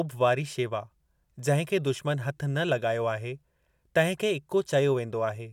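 No technical faults can be heard anywhere in the speech. There is nothing to place at any point in time and no cause to trace.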